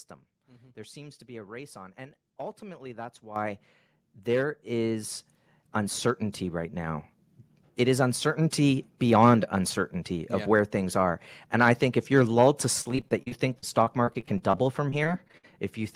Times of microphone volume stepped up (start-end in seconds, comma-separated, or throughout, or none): 3.36